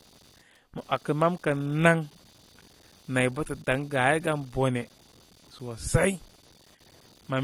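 Computer activity noise runs through the whole clip. Changing processor or graphics load disturbs the ground the audio circuit shares with the computer, injecting a buzzing, chirping pulse train near 300 Hz at about 30 dB below the speech that follows machine activity rather than the speech.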